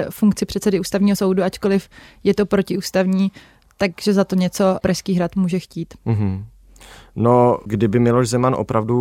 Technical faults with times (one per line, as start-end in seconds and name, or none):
1.14-1.16 compressed frames skipped
3.67 compressed frames skipped